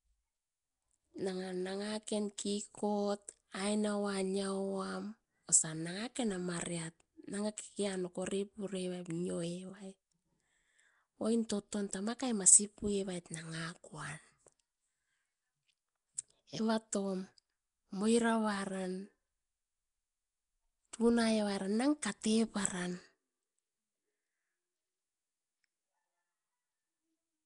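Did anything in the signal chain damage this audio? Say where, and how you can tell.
Yes. Throughout the speech there is a rough, hissy halo and a smeared, underwater quality. Nothing is present above 10.6 kHz. This is codec damage, likely Nellymoser compression, around 44 kbps. Fixed low bit allocation starves weak bands, which are filled with noise.

Pre-echo occurs at 11.49 s, just before "toton tama kai masi". A short hiss of about 10 ms precedes the attack, and the onset sounds soft. This is also a codec stage fault. The transform block spreads its quantisation noise into the quiet moment before the sharp attack.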